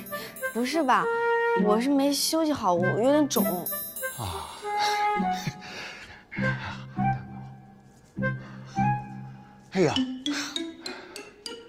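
At 4.74 s a call bitrate drop sets in and lasts until 11.11 s. The encoder, starved of bits, codes coarsely and trims the highs, giving a rough, muffled sound that fits a fall from 96 to 20 kbps, worst for 3.8 s. A spectrogram shows the upper band emptied above a flat ceiling.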